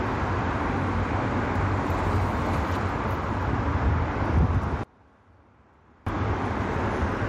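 From 4.84 to 6.07 s the sound drops by about 27 dB, leaving a faint remnant for about 1.2 s before returning at full body. The likely cause is one channel inverted: with one stereo side in reversed polarity, the shared content cancels when the two are summed to mono. On a waveform the envelope collapses to a sliver across that span; a spectrogram shows the bands nearly emptied.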